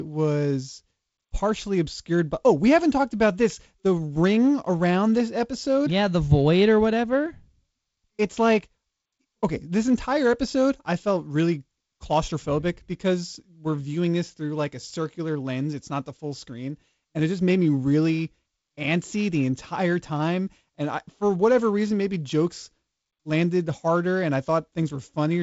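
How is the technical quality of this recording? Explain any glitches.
No glitches: the speech arrives as wideband telephone audio with nothing above 7.7 kHz, a faint hiss in the upper band and a slightly grainy lower band, which fits G.722 coding in its 48 kbit/s mode.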